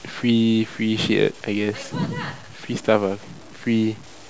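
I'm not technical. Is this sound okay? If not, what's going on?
No. The speech sounds grainy and gritty all the way through, worst on quiet parts. The likely cause is low bit depth without dither: the sound was stored too coarsely and rounded off.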